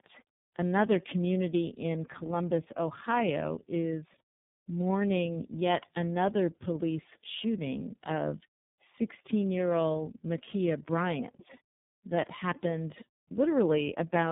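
Throughout, the speech shows tandem speech coding: AMR-NB at 6.7 kbit/s, then G.711, then iLBC re-encodes it, so two speech coders stack their errors. Unlike a single low-rate codec, the roughness and warble compound, with nothing above 3.7 kHz.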